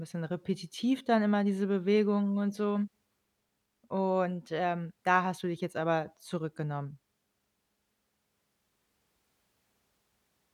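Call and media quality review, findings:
No call or media quality faults found in this speech recording.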